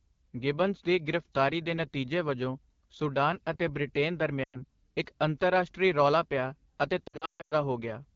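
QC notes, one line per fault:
Throughout: AMR wideband (HD Voice) codec. The sound is rough and raspy because the coder models the vocal tract with sparse pulses and fills the band above 6.4 kHz with shaped noise. The damage is plainly audible, which fits a low rate such as 8.85 kbit/s.
4.43 to 4.62 s: lost AMR speech frames. About 100 ms of speech is missing, which fits five 20 ms frames failing their checksum. The decoder repeats the last pitch and vocal tract settings at falling gain, so the sound dips to near silence before recovering weakly.
7.08 to 7.53 s: lost AMR speech frames. About 340 ms is lost, scattered over 440 ms with runs of up to 140 ms, which fits seventeen bad frames. Concealment drops the longer gaps to near silence quickly, giving a choppy warble that returns rough between runs.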